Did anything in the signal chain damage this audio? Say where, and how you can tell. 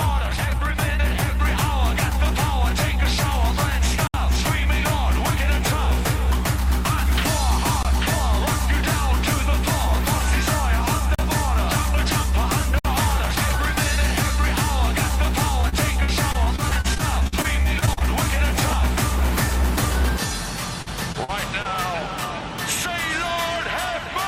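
Yes. At 4.07–4.14 s, 7.83–7.85 s, 11.15–11.19 s and 12.79–12.85 s the sound drops abruptly to dead silence for 20 to 67 ms. These are blocks of digital silence, where the driver or buffer stage failed to deliver samples in time and zeros were output.

From 15.61 to 18.02 s, and again from 20.82 to 21.67 s, the audio turns choppy and robotic, with fragments missing. This is repeated packet loss on the network. Eighteen holes, the longest 52 ms, are patched by stretching the previous sound, then four more, the longest 42 ms.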